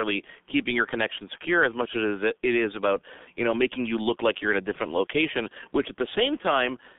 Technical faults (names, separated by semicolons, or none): G.723.1 codec